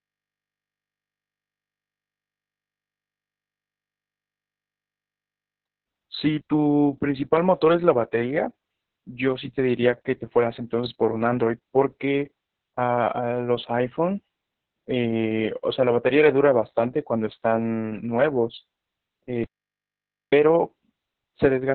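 It's a speech clip squeezed hard through Opus voice compression. Everything above about 4.2 kHz is gone, so the voice sits in a narrowband telephone-like box, and the SILK speech coder is clearly working on very few bits. The excitation gets coded so coarsely that it comes out muffled, hoarse and a bit robotic. The heavy damage fits a bitrate down around 6 kbps, probably with long 60 ms frames. Then at 19.44 s there's an audio dropout to silence. The sound cuts off dead and comes back at 20.33 s, leaving about 0.89 s of pure silence with no room tone at all. Whatever was said in that gap is lost. That points to the input likely dropping out briefly, say a device or link hiccup or a momentary mute, while the recorder kept writing silence.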